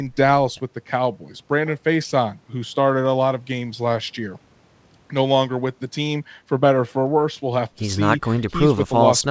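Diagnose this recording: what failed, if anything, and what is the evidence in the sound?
Nothing failed here; no fault is audible in this speech.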